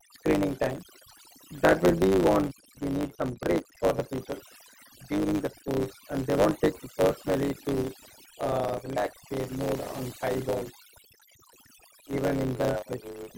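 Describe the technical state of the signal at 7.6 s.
At 7.6 s you're hearing overdone noise removal, which runs through the whole clip: over-aggressive band gating leaves the speech over near-silence sprinkled with twinkling specks. There's also a block size mismatch (truncated) throughout: each block's tail gets dropped, giving a 100 Hz buzz and speech running about 1.09 times fast at roughly normal pitch.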